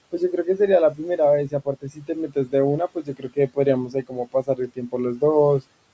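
Speech cut by the noise suppressor at 1.51–2.1, 2.28–2.53, 2.95–3.57 and 3.89–4.94 s: it mistook bits of speech for noise and ducked them by up to about 17 dB, so they sound swallowed.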